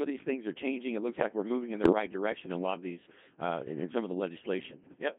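Codec 2 vocoder throughout: the speech is rebuilt from pitch, voicing, energy and envelope as sine waves, giving a robotic, buzzy, heavily damaged sound in a 150 Hz to 3.5 kHz band, consistent with roughly 2.4 kbit/s.

Bit errors on digital voice radio at 1.83 to 1.92 s and 4.84 to 5.02 s: a few percent of flipped bits corrupt frame parameters, so the voice jumps in pitch and level and warbles into bleeping gibberish.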